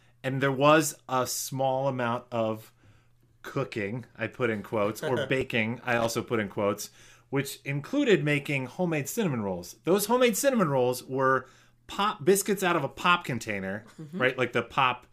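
At 5.93 s there's a short burst of loose connector crackle, running to about 6.10 s, right before "put in quotes which". It's the classic worn or dirty contact that keeps making and breaking as it shifts, so the speech gets chopped into fragments for those 0.17 s, and any DC sitting on the line turns each break into a little pop. What you hear is an uneven, scratchy crackle rather than a clean click.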